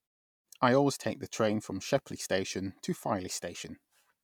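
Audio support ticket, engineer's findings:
Checked the speech clip over and found nothing wrong with it, so there's no fault to log here.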